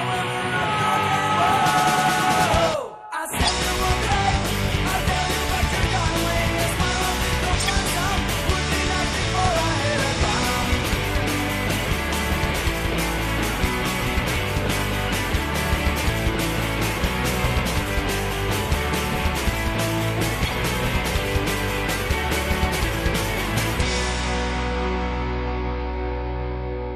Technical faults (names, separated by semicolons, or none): MP3 compression; corrupt frame decoded